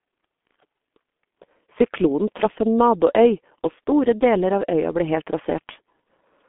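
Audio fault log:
Throughout, G.723.1 codec: speech is confined to roughly 200 Hz to 3.5 kHz and coded at about 6.3 kbit/s in 30 ms frames, so it sounds muffled and hoarse with smeared consonants. Unlike plain band-limiting, the slowly updated voice model adds a rough, buzzy texture.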